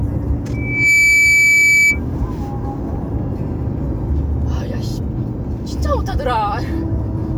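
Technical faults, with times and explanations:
0.53 to 2.00 s, loudspeaker feedback squeal: a single tone at 2.3 kHz swells over roughly 0.4 s to about 10 dB above the sound, as the microphone re-amplifies its own loudspeaker output at that frequency. A spectrogram shows one bright horizontal line; the waveform envelope balloons.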